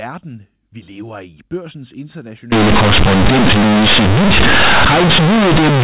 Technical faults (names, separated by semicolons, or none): companded audio read as linear